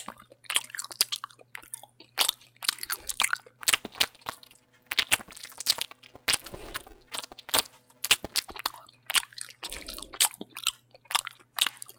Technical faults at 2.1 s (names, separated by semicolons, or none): none